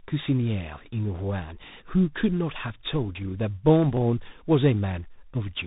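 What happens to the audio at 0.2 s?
Rough, noisy speech, with nothing above 3.8 kHz, present from the start through the whole clip. This is tandem speech coding: the sound fits two speech coders in a row, ending in CVSD, each re-encoding the previous one's already degraded output.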